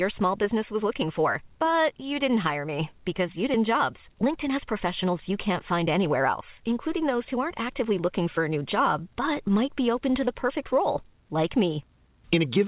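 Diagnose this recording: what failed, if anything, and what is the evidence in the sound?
Skip ahead in the network and jitter buffer stage: right after "hire me because you", at 3.54 to 3.56 s, the audio jumps straight on with no fill. Roughly 0.7 s of audio was discarded, probably to cut accumulated delay, and the two sides are butted together.

Then there's a jitter buffer speed-up from 3.78 to 7.94 s, ending just before "looking for a new". Speech runs about 8% fast at unchanged pitch because the buffer trims pitch-period slices, around 0.4 s in total, to drain its backlog. Over the G.711 path it sounds hurried but band-limited to 4 kHz.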